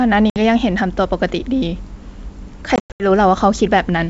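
Packet loss on an ADPCM call appears at 0.30–0.37 s, where a few packets drop out (60 ms), and again at 2.76–3.04 s, where roughly ten go missing in scattered gaps totalling 200 ms, the longest 100 ms. Each hard-edged silence ends with slightly distorted speech, because the decoder's predictor and step size have drifted from the sender's and take some tens of milliseconds to resynchronise. The underlying G.722 wideband coding is intact.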